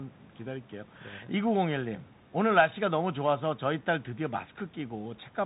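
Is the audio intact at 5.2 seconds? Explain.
No, at 5.2 s the speech carries the Bluetooth CVSD headset codec damage heard throughout. Nothing passes above 3.8 kHz, and the one-bit adaptive-step coding, which fits a 64 kbps link, leaves a granular hiss and scratchy s sounds that set it apart from a clean band limit.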